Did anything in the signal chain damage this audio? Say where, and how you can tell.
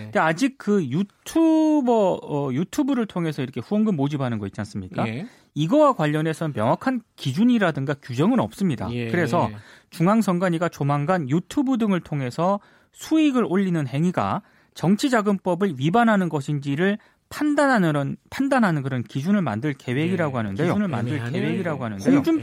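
Yes. From 20.48 s to the end of the clip, the speech is accompanied by a doubled audio track: a second full-band copy trails the original by roughly one and a half seconds, sitting about 5 dB lower. The copy appears abruptly at 20.48 s with no reverb tail or room colouring, so it is not acoustic echo. The likely cause is the same signal being captured again through a slower routing or buffer path, or an edit leaving two offset copies.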